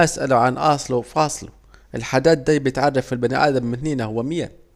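No technical faults are audible anywhere in the speech recording.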